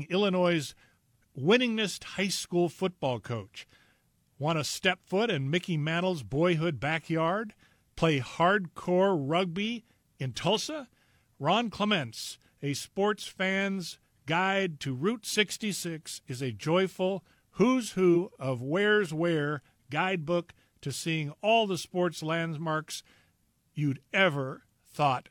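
At 18.12 to 18.17 s, between "is a joyful who's" and "of where's where guidebook", damaged data in the compressed stream makes the decoder misread frames and lose sync. A spectrogram shows a 50 ms disturbance.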